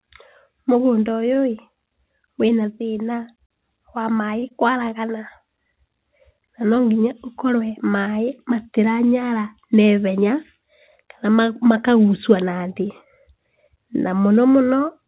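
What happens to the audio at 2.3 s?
Nothing goes wrong at 2.3 s: the speech carries on intact through that moment, heard through the same narrowband call path as the rest of the clip, with nothing above about 4 kHz.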